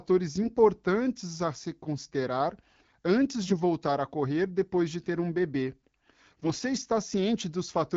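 Speech over AMR-WB HD Voice, with the light codec texture you'd expect at what sounds like the 12.65 kbit/s mode, hit by AMR bit errors in three bursts: 0.42 to 0.55 s, 3.43 to 3.56 s (between "a se considerar antes" and "voltar a correr depois"), and 6.30 to 6.58 s right after "de ter um bebê". Pitch and level hold, but the voice goes scratchy and gargly because flipped low-priority bits, a few percent of them, scatter the excitation pulses and skew the fine pitch, gain and spectral parameters.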